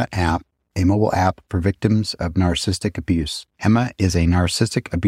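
From 2.92 to 4.93 s, periodic USB or driver dropouts occur. Every 1.0 s, about a millisecond of speech drops to silence, heard as regular ticks.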